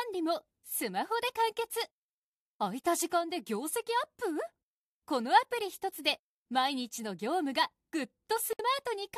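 A gap at a join of encoded pieces opens at 8.53 s: about 63 ms of silence, likely from untrimmed encoder padding, before the sound resumes where it stopped.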